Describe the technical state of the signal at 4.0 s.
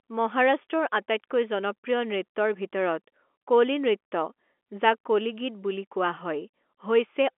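At 4.0 s the signal is intact, with no fault at that moment, only the narrow telephone band of the G.711 line, which passes roughly 250 Hz to 3.4 kHz and leaves at most a faint low-level grain riding on the speech.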